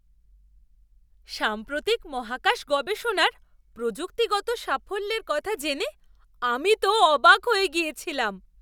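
Nothing in this bit of speech stands out as a technical problem; it all comes through without a hitch.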